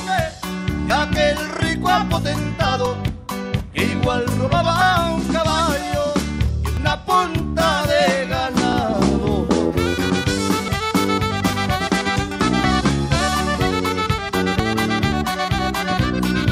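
Audio missing between chunks at 0.90, 2.86, 4.81, 6.77, 8.73, 10.68, 12.64 and 14.59 s: a regular skip of roughly 40 ms, likely lost while switching between 2-second processing chunks.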